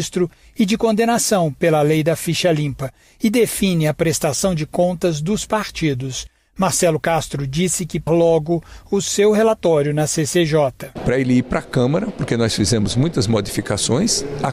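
Around 8.06 s the audio suddenly jumps forward, with a tiny blip right at the join, as if a piece in the middle just isn't there. That's most likely a stream segment skipped. One chunk of the segmented stream never loaded, and the player carried straight on with the next one instead of waiting. Whatever sat in that missing segment is simply gone, and the blip is the hard edit where the two ends meet.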